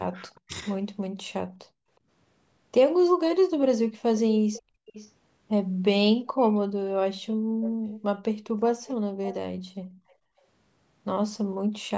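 From 0.11 to 1.32 s the speech dips in pieces, about half a second in total, falling by as much as 35 dB. This is speech suppressed in double talk. The likely cause is the echo canceller hearing both sides at once. It could not tell the local talker from the loudspeaker echo, so it pulled everything down.

At 1.7 to 1.9 s the room sound drops by about 31 dB for a moment. This is background gated by the echo canceller. It clamped the microphone while the loudspeaker played, then let go.

From 3.25 to 10.13 s a fainter copy of the speech trails the original. It arrives 482 ms late, about 15 dB below the direct sound. This is echo leak. Some of the loudspeaker sound likely reached the far side's microphone, survived its echo canceller and came back.

The background gating returns three more times. At 4.62 to 4.86 s it drops about 29 dB. At 7.34 to 7.42 s it drops about 30 dB. At 10.15 to 10.42 s it drops about 24 dB. 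Each time the room sound vanishes briefly and then returns.

The double-talk suppression also recurs briefly. At 7.7 to 7.77 s the speech dips about 10 dB. At 9.83 to 9.87 s it dips about 15 dB. Both are short cuts in level while the two sides overlap.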